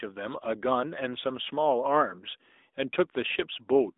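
From start to finish the speech carries AMR narrowband mobile codec damage. The codec rebuilds the voice from a vocal-tract model fed by sparse pulses in short frames, and the loss is plainly audible. Nothing sits above 3.8 kHz, and the low end thins below 250 Hz, leaving a telephone band up to 3.7 kHz. Sibilants go dull. The voice has a buzzy, synthetic edge, coded at 10.2 kbps, one of the higher AMR-NB rates.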